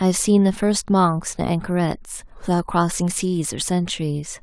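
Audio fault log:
The speech signal holds steady, with no audible technical faults anywhere in the recording.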